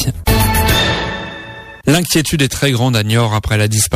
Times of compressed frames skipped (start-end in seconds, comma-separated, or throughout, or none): none